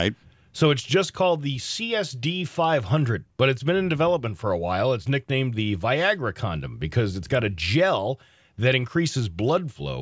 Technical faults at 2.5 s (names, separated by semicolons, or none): none